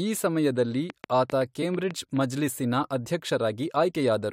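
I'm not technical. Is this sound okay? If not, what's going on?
No. Just after "ಈ ಸಮಯದಲ್ಲಿ", from 0.9 to 2.18 s, there is a train of clicks: about seven sharp ticks, roughly four to five per second at an uneven pace, sitting on top of the speech. The likely cause is electrical interference or a faulty connection or power supply injecting pulses.

At 1.61 s there are compressed frames skipped: a short piece of the compressed file, about 20 ms, was lost or rejected as damaged, so playback jumps slightly ahead. That matches one 23.2 ms frame.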